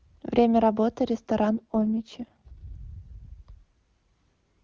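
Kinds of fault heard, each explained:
AMR rate drop: from 1.50 to 2.76 s the speech turns rough and raspy, which fits the codec falling from its top HD Voice mode to about 6.6 kbit/s. Unlike a bandwidth drop or dropout, the band stays wide and nothing goes silent.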